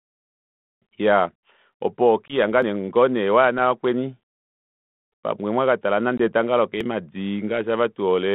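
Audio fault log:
1.73, 2.62 and 6.81 s, dropped buffer (overrun): likely the program missed reading its audio buffer, so about 40 ms vanished and each point is a skip ahead.
2.28–2.35 s and 6.18–6.28 s (after "pamwe mwakatala"), packet loss on an ADPCM call: about one 20 ms packet of the 32 kbit/s G.726 stream was lost, leaving a hard-edged gap. The decoder's predictor then lost track, so the speech returns with brief distortion before settling.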